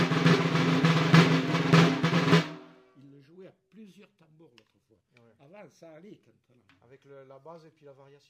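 Nothing in this one trips the ear at all, so there's no fault to walk through.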